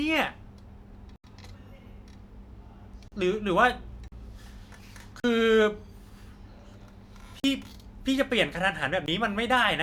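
A speech recording broken by six blocks of digital silence. The sound drops out and returns with no fade. The longest hole runs from 1.16 to 1.24 s, about 80 ms. Four 40 ms gaps start at 3.08, 4.08, 5.20 and 7.40 s. A final 19 ms dropout comes at 9.06 s. These gaps point to the playback program failing to fill its output buffer in time.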